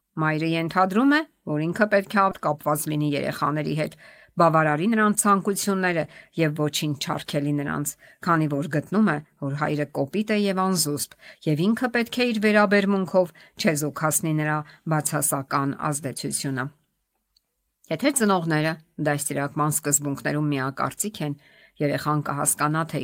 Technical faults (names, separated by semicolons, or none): skip ahead; jitter buffer speed-up